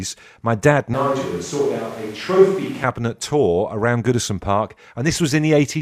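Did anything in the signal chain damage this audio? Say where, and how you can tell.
Yes. From 0.94 s to 2.84 s the speech abruptly turns hollow and roomy, loses low end, and drops by roughly 5 dB, with background noise rising to around 25 dB below the speech, then snaps back just as suddenly. This points to a switch to a distant microphone at the capture stage, most likely the close mic's feed dropping out so a farther pickup carries the sound. On a spectrogram, that stretch shows a thinner bottom band, reverberant smearing between syllables, and a lifted noise floor, bounded by sharp vertical edges.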